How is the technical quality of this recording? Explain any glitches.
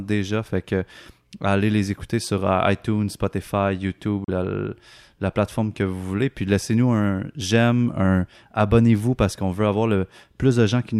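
There is one glitch. From 4.24 to 4.29 s the speech cuts to about 36 ms of complete silence, then resumes. This is likely a Bluetooth stall, where held-up wireless packets let the headphone buffer run dry. The gap is a brief silence, after which playback resumes.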